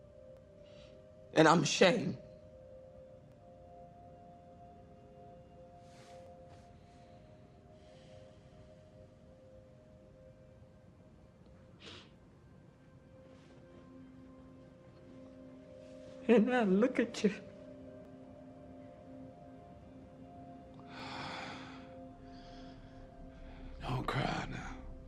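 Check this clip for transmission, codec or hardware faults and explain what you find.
There is one recurring fault: clock drift buffer slips. From 0.37 s to 23.94 s, a short click or pop repeats about every 2.95 s, around ten times in all. The likely cause is two devices on separate clocks, mismatched by roughly 500 parts per million. The buffer between them drifts until a block of around 70 samples is dropped or repeated. On a waveform each slip shows as a discontinuity, and on a spectrogram as evenly spaced thin vertical broadband lines.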